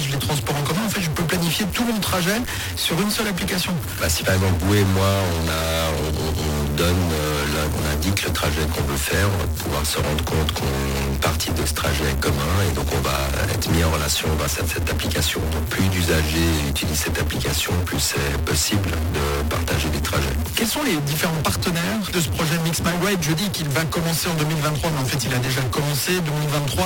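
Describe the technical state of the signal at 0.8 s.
Distortion runs through the whole clip, with hiss in the quiet gaps, which likely comes from a stuck bit forcing one data bit to a fixed value. Small, uneven hiccups run from 0.27 to 12.17 s. These are repeated timing corrections, each briefly repeating a short piece, adding roughly a fifth of a second and slowing playback to 98%. Beneath both lies clock drift between sender and receiver. The sender's clock runs about 2% slow, so the receiver's buffer keeps draining and needs topping up throughout.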